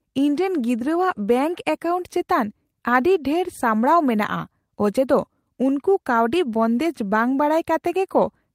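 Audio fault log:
No fault is heard anywhere in this speech clip.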